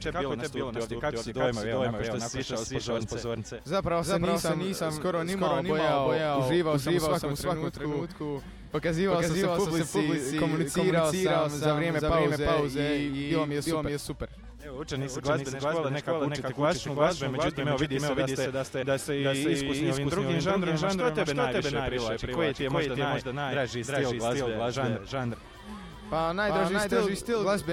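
From start to end, the whole sound is heard twice: a doubled audio track, with a second full-band copy trailing roughly 0.4 s behind at about the same level as the original. Unlike an echo or reverb, the repeat is a single clean replica that neither decays nor carries any room colour, so every event lands twice with equal weight. The likely cause is the signal being captured again through a slower path, or an edit leaving two copies out of step.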